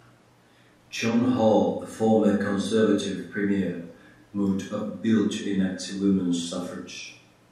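Listening to the speech recording, nothing stood out as a technical problem.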